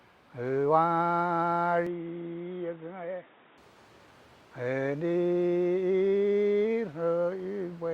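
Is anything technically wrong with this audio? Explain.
Yes. From 1.87 to 3.58 s the sound turns narrow and boxy, with nothing above 3.8 kHz. Then it clears again. The likely cause is the input switched to a poorer device. That device passes a narrower band and brings its own quiet noise floor. There is no gap at either switch.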